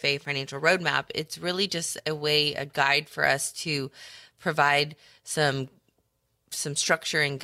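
Listening to the speech recording, nothing stood out as a technical fault at any point.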